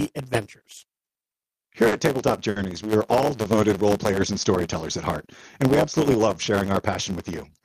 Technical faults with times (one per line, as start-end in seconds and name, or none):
0.00-7.64 block size mismatch (truncated)
0.77-1.09 short stall from a late packet
1.88-1.94 short stall from a late packet
2.50-2.58 short stall from a late packet
6.13-6.63 jitter buffer speed-up